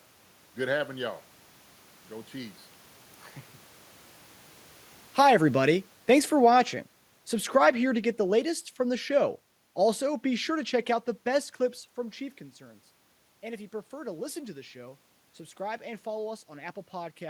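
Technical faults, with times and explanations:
5.05–6.78 s and 7.41–9.44 s, automatic gain falling: The level sinks smoothly, by about 5 dB in the first stretch and about 3 dB in the second. The automatic gain control judged the input too loud or its background noise too strong and eased its gain down over each span. The room noise drops along with the speech, so the whole signal is turned down. That sets these apart from the talker's own movements near 3.5 s and 11.5 s.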